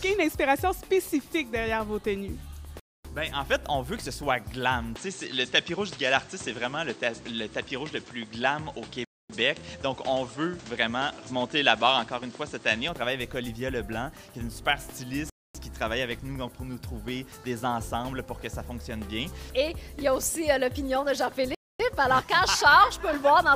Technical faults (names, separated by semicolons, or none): gap between chunks; input switched to a poorer device